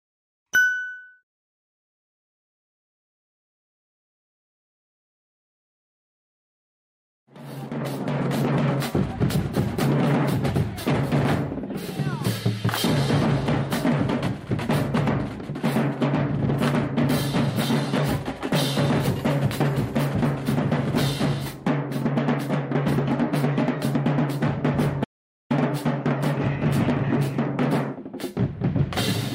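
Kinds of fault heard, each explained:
Audio dropout to silence: from 25.04 to 25.50 s the sound cuts off abruptly into silence for about 460 ms, then resumes mid-flow. That gap most likely comes from a lost input link. Unlike a fade or noise gate, no room tone survives.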